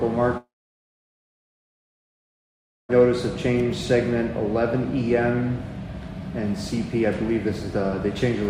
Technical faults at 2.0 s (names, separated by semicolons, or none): long network dropout